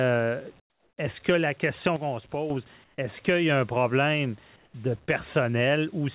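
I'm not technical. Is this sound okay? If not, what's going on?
No, there are two problems.

Comfort noise in place of the background: during pauses, the call system likely stopped sending sound, and the receiving end filled the gap with made-up hiss. From 0.6 to 0.98 s, 2.84 to 2.98 s and 4.56 to 4.74 s, the real room sound is replaced by a flat, quieter noise.

Sudden gain jump: the volume was likely changed in a single instant with no gradual fade. From 1.96 to 2.50 s, the speech and the background suddenly drop quieter together, then jump back up just as abruptly.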